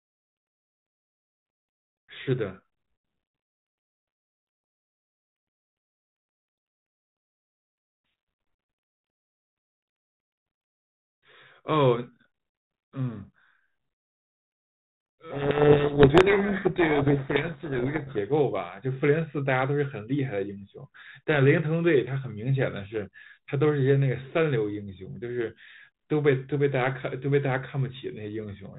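From 15.32 to 18.19 s the speech is buried in harsh distortion, a codec payload misread. The sending and receiving ends disagree on the bit order of the G.726 code words. The decoder still gets frames that look valid. But it reads each code word's bits in the wrong order. So the reconstructed samples are wrong throughout that stretch. Clean decoding returns once both sides agree again. Around it, the 32 kbit/s G.726 path adds only light, band-limited coloration.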